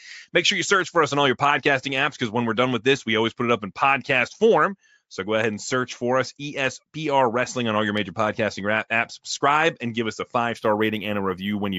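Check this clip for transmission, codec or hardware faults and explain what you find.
One fault, near the end of the speech. From 10.57 s to 11.78 s, just after "give us a five", there is imaging from linear upsampling. The rate appears to have been raised by simple straight-line interpolation between samples, which fits a 16 kHz source brought up to 48 kHz. That interpolation is a poor anti-imaging filter, so the top of the original band sounds dulled, and a faint mirrored copy of the spectrum sits between 8 kHz and 16 kHz, roughly 35 dB below the signal. It adds a light metallic shimmer on sibilants. On a spectrogram, the energy under 8 kHz is reflected upward as a faint, flipped band above 8 kHz. The waveform looks slightly segmented rather than smooth.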